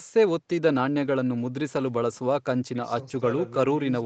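No faults in the speech; energy stops at about 8 kHz, as expected from the call's microphone processing and an Opus call path at that bandwidth, both working as designed.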